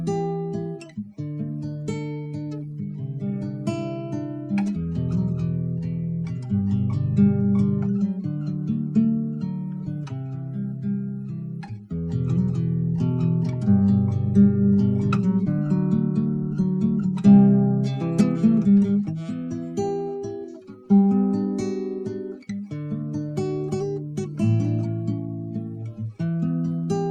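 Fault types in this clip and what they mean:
No audible faults detected.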